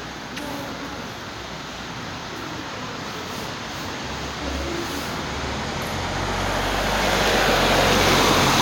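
No technical faults are audible anywhere in the recording.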